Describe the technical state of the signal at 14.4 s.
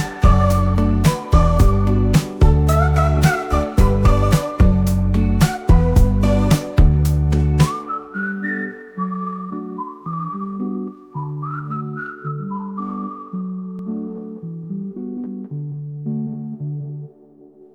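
At 14.4 s there's a doubled audio track (13.79 s to end): a dry copy lags a fifth of a second, a few dB down, likely via a slower capture path.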